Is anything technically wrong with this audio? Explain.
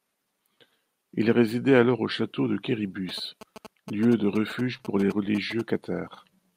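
Yes, there are two faults, and they overlap in the second half of the speech.

From 3.09 s to 5.61 s, just after "alors au château de", GSM signalling bursts are audible. A 2G handset close to the recording chain is exchanging short control transmissions with the network rather than carrying a call. The audio circuitry rectifies the RF envelope, so the bursts appear as a galloping cluster of ticks and brief buzzes at 217 Hz, sitting roughly 15 dB below the speech.

From 4.77 s to 5.36 s, within that interference, there are repeated stalls (stutter). Packets arrived late or slower than real time, and the jitter buffer emptied four times. Each time the receiver extended the preceding sound to cover the wait, for 54 ms of filler in total, with the longest gap 23 ms. That is about 11% of the span. No speech is lost, but the delivery drags and hiccups.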